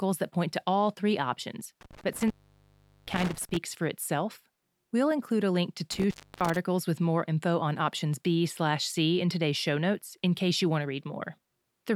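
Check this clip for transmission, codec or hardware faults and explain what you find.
The speech has one hardware fault, an intermittent contact, occurring twice. Between 1.81 and 3.57 s, and again between 5.92 and 6.57 s, a loose connection breaks the signal path. The speech drops out with crackle at each edge. Gaps last about 0.77 s and 0.3 s, leaving faint hiss.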